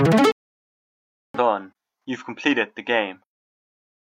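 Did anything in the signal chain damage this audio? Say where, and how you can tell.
Yes, a digital broadcast dropout at the receiver. The sound goes silent from 0.32 to 1.39 s, about one second lost while the receiver muted.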